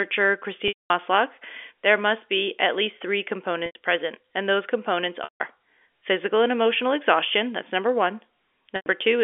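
Telephone-band speech with packet loss with pitch repetition at 0.68–0.90 s, 3.66–3.75 s (after "be at least three"), 5.24–5.40 s and 8.76–8.86 s (after "exhaustion that's number one"). The receiver repeats the last pitch period to bridge each gap, which shows on a spectrogram as flat, frozen harmonics fading out before the speech resumes.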